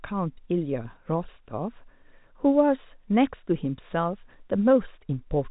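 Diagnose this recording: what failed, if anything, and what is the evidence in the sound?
Nothing failed in this recording, and the sound carries no evidence of a fault at any stage.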